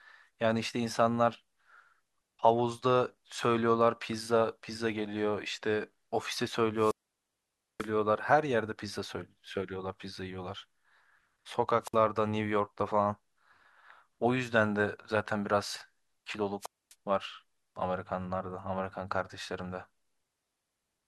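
A rush of hiss, then near silence, interrupts the speech at 6.75–7.91 s (mute about 0.89 s), 11.81–11.96 s (55 ms) and 16.60–16.95 s (about 0.25 s). These are wireless microphone squelch dropouts: the FM signal faded until the receiver's squelch muted the output.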